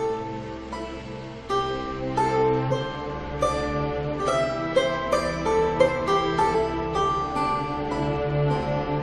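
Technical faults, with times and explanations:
2.70 s and 6.54 s: damaged data in a compressed stream. Corrupted frames make the decoder misread the bitstream and resynchronise, giving brief glitches in the music, each lasting under 20 ms.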